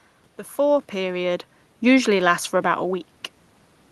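Nothing in this speech recording points to a technical fault: the steady room noise belongs to the recording space, the level shifts near half a second and again around 3 s sound like the talker moving relative to the microphone, and the top end rolls off near 12 kHz, as expected from the call codec path the audio travelled through.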